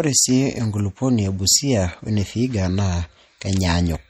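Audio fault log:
Throughout, MP3 compression: likely a lossy MP3 encode at a bitrate that fits roughly 48 kbps, which starves weak frequency lines so they drop in and out between frames. The speech plainly sounds watery and swirly, and nothing remains above 19 kHz.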